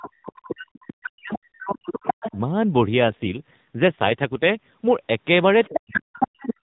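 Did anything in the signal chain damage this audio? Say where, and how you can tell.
Yes. Speech suppressed in double talk, at the call-processing stage, covers 0 to 0.68 s, 0.89 to 2.37 s and 5.68 to 6.45 s. The speech sinks by up to about 40 dB, likely because the echo canceller, faced with both sides talking, attenuated everything rather than separating them.

The other side's voice leaks through at 0.77 to 0.9 s, 1.33 to 1.39 s, 1.88 to 2.37 s, 5.63 to 6.0 s and 6.24 to 6.54 s. It starts about 25 dB under the speech and rises to about 5 dB under, likely loudspeaker echo the canceller left in the microphone signal.

An AMR rate drop runs from 3.04 to 4.67 s, where the network pushed the narrowband codec from 12.2 down to 5.9 kbps. The bandwidth stays the same and nothing drops out, but the speech turns buzzier and more synthetic until the rate recovers.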